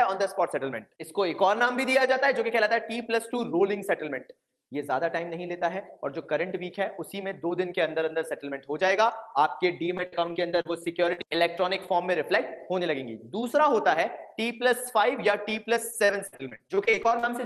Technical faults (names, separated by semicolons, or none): repeated packet loss (robotic sound)